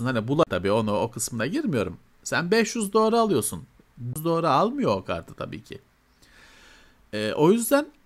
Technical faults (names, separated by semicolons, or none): CD skip